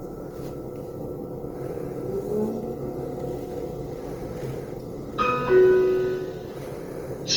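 Throughout the clip, tonal parts of the sound turn grainy, rough and noisy, plainly audible with the top end still reaching about 20.2 kHz. The likely cause is Opus compression in its music mode, which fits a bitrate near 24 kbps, where sparse bands get filled with noise or folded content.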